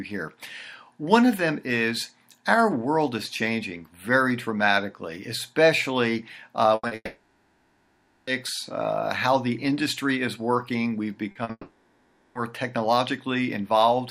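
At 6.75 s a burst of packet loss sets in: about 80 ms of audio is replaced by the decoder extending the last sound as a buzz or hiss that weakens toward 6.86 s. Unlike the shorter losses, it is long enough to be heard as a held, fading tone rather than a blip.

Right after, from 6.87 to 6.94 s, a short concealed packet loss covers about 40 ms with a synthesized continuation that blends back in. It is heard as a brief smear or wobble rather than a sustained buzz.

From 6.95 to 8.30 s the sound drops out for about 1.3 s: a fading continuation, then near-silence, then the audio resumes with that stretch missing. This is likely a long network dropout, distinguished from the bursts by its length and the dead air.

Two more short concealed packet losses follow at 11.31–11.38 s and 11.43–11.50 s, each about 40 ms, and then what is likely a second long network dropout from 11.51 to 12.38 s removes about 0.84 s in the same fade-then-silence way.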